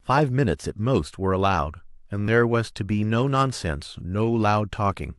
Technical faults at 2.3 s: repeated buffer

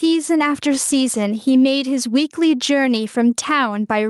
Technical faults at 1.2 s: gain pumping

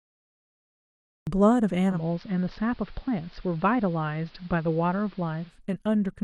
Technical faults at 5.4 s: digital radio blending to analogue

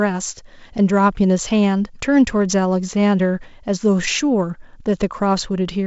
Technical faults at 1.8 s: none

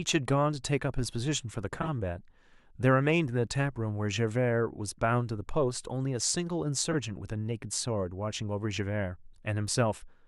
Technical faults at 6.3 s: none

